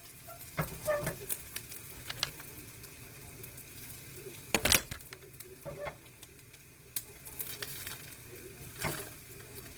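Opus compression runs through the whole clip. The damage is plainly audible. Tones turn rough, grainy and noisy, with little swirling. Content still reaches about 20.4 kHz. This likely comes from Opus music mode at a very low rate, near 16 kbps.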